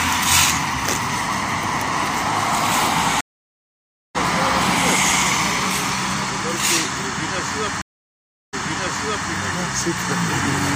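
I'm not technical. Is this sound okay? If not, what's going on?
No. The connection dropped twice and the player reconnected, a stream reconnect, so the sound cuts out, then restarts at the wrong point: at 3.21 s, silent nearly a second, skipping ahead about a second; at 7.82 s, silent 0.71 s, then repeating the last 0.77 s.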